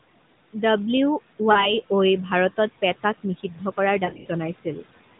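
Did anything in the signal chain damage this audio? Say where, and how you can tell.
Yes. Three kinds of damage are audible, two from call processing and one from the radio link.

Noise suppressor artifacts run through the whole clip, a call-processing fault. The suppressor pulls steady room noise down by about 16 dB in each frame, so the background sinks in the pauses and comes back under the speech. On a spectrogram, the noise floor appears as a patchy, flickering layer that brightens whenever speech energy rises. The waveform shows a background that pumps with the speech rather than holding level.

Lost AMR speech frames sit in two places. From 1.52 to 1.74 s, a short gap of about 40 ms, roughly two 20 ms frames, is bridged by the decoder repeating its last good pitch and vocal-tract settings at falling gain. This produces a brief smeared dip, and the sound then returns slightly rough. 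From 4.06 to 4.27 s, losses totalling about 120 ms are scattered over 200 ms, none longer than about 40 ms, which gives a stuttering warble. On a spectrogram, these stretches show frozen, stretched harmonics, and the waveform shows sagging envelope.

Speech cut by the noise suppressor occurs from 3.43 to 3.78 s and from 4.54 to 4.86 s, again at the call-processing stage. In each window, about a tenth of a second of soft speech is mistaken for noise and turned down with the background, by up to about 10 dB in the first case and about 18 dB in the second, so those sounds come out swallowed. The waveform shows sudden notches in the envelope, and the spectrogram shows faded consonant energy. All of this sits inside the 4 kHz ceiling of the AMR narrowband codec.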